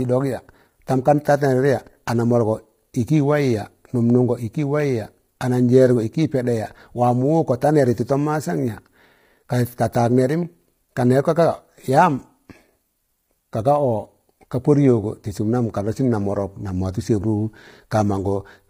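From start to end, the speech sounds rough and grainy. Noise fills the gaps between harmonics, and nothing is heard above 15.6 kHz. The likely cause is heavy low-delay AAC compression. Its short frames blur the pitch structure, and the damage fits a bitrate near 24 kbps.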